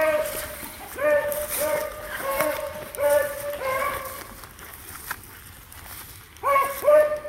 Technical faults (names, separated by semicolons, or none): none